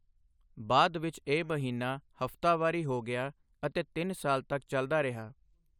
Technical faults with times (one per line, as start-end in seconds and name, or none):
none